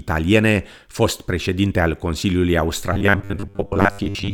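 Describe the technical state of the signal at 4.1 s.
Robotic sound from repeated short buffers covers 4.1 s, running from 2.93 s to the end of the clip at 4.34 s. The likely cause is audio arriving too seldom, so the playback fills the gaps by looping its last chunk, around 10 ms long, while fresh speech is skipped. For most of that stretch the speech is replaced by repeats, and the steady 10 ms period stamps a fixed 100 Hz pitch on it, giving a rigid metallic buzz that only loosely tracks the words.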